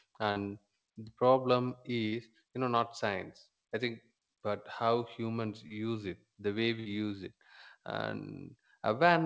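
Brief smears or wobbles interrupt the speech at 0.32 to 0.38 s, just before "the problem"; at 2.08 to 2.14 s, between "the problem" and "you know not science"; and at 5.68 to 5.72 s, between "think but how humans" and "it the way". Each is short concealed packet loss. About 40 ms of audio (20 ms in the third) never arrived in time, and the receiver papered over it by extending the preceding sound before blending back.

At 6.80 to 6.87 s a longer burst of packet loss leaves roughly 60 ms missing. The receiver continues the last sound and fades it, giving a held buzz or dying hiss before the speech resumes slightly further on.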